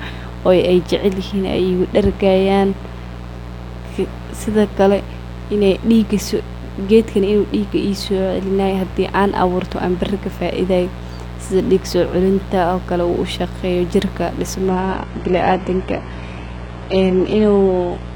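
A steady, raspy buzz runs under the whole of this speech recording, sitting fairly high at about 15 dB below the voice. This is mains buzz: sharp switching spikes from a dimmer, rectifier or unshielded cable, repeating twice per 60 Hz cycle, spray harmonics well up into the kilohertz range. From 14.69 s, right after "shaqeyo jirka", the sound abruptly turns duller with no gap, nothing reaching above 11 kHz, through to the end. That sudden shift marks an adaptive stream switching to a lower bitrate as the connection slowed, which fits a drop from roughly 96 kbit/s AAC to a 12 kbit/s HE-AAC version.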